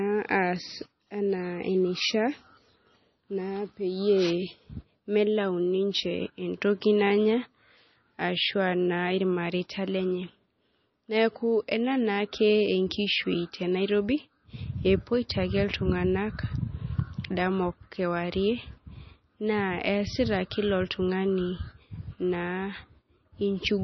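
From start to finish the speech sounds watery and swirly, with metallic chirps on s sounds and nothing above 5.9 kHz. That points to heavy MP3 compression, likely at a bitrate around 25 kbps, where the starved encoder cut the treble and let weak frequency lines flicker between frames.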